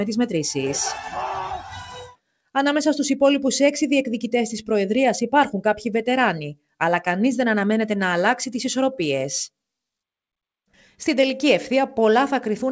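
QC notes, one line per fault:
Throughout: noise suppressor applied to music or sounds. A speech-tuned suppressor stays active across the whole clip and treats sustained, steady content as background noise, pulling it down while sharper onsets pass. Level keeps rising and falling by around 5 dB as the gain tracks what it judges to be noise, so held material pumps and loses body, and decays thin out. The band stops at 8 kHz, in line with a G.722 call path at 64 kbps.
1.6–2.55 s and 6.55–6.75 s: sound cut by the noise suppressor. In both spans the suppressor classifies the sound as noise and cuts it much harder than the surrounding material, by about 22 dB at the deepest point in the first span and about 21 dB in the second. Around 0.7 s of the first span and 0.2 s of the second are affected. The steady portion sinks and its tail is clipped short, so the sound appears to drop out.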